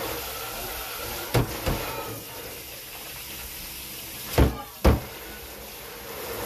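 A recording of everyday sounds, with no technical fault to point to anywhere in it. There is nothing here that needs a time or a cause.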